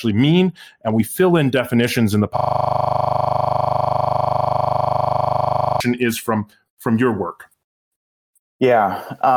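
Right after "in definitions in the", at 2.37 s, the speech gives way to a rough, steady buzz at 25 Hz that lasts until 5.80 s, when it resumes with "is from from your". This is a system hang loop. The computer or driver froze while the sound hardware kept replaying the same 40 ms stretch of its ring buffer, about 86 times in a row. A loop that short repeats too fast to hear as a stutter and fuses into a tone.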